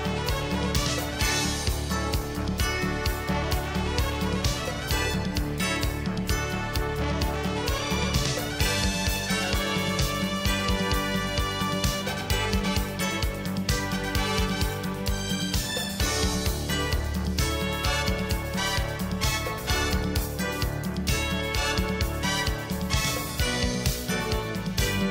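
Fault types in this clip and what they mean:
integer overflow: peaks going at most about 1 dB past the integer limit wrap to the opposite sign instead of being held flat, giving violent cracks at 0.75, 6.76, 11.84, 12.30, 14.15, 20.16 and 23.86 s, far sharper than the flattened buzz of clipping.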